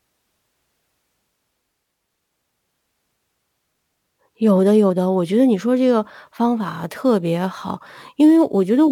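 Crude rate conversion sets in at 6.57 s and runs to the end of the clip. From that point the speech behaves as if it was moved from 48 kHz to 44.1 kHz by keeping whichever sample lay nearest, with no anti-aliasing filter, so samples are periodically skipped. That repeating error adds inharmonic tones sitting roughly 35 dB below the speech, heard as a faint gritty fizz that clings to louder and brighter sounds.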